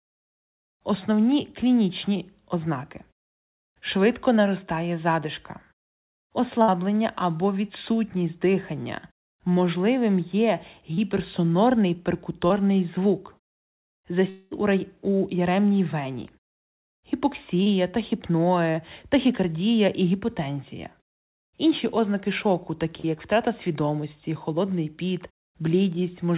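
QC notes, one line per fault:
6.62 to 6.71 s, burst of packet loss: about 60 ms of audio never arrived. The receiver extended the last sound for roughly 58 ms and faded it, then resumed at "або відсутність дихання" with that stretch gone.
10.94, 12.47, 17.63, 18.71 and 23.00 s, short concealed packet loss: each time about 30 ms was lost and patched with 26 to 38 ms of continued sound blended back in, heard as a quick smear or wobble. The last falls between "ознаки шоку" and "як втрата свідомості холодний".
14.30 to 14.54 s, long network dropout: about 210 ms is missing. A fading continuation of roughly 214 ms fills the hole with no silence, then sound returns at "у рай у яремній". The likely cause is an extended network interruption.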